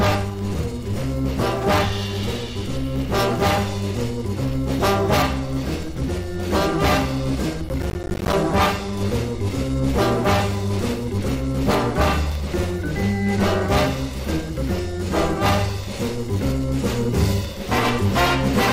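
From 7.69 to 8.33 s there is a burst of processor overload crackle. The processor repeatedly misses its deadlines, leaving many tiny silent gaps with hard edges, which fits buffers of about 10 ms. Together they make a gritty tearing over the sound, then it stops.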